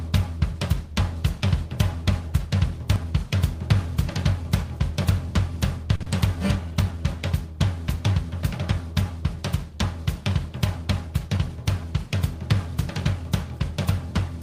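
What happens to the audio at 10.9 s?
That's a jitter buffer speed-up from 10.82 to 11.38 s. An overfull buffer trims pitch-period slices, about 50 ms in all, so the audio runs 7% fast at the same pitch and sounds hurried.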